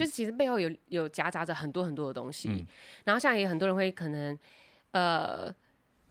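Listening closely to the speech in this recording, nothing stood out as a technical problem at any point.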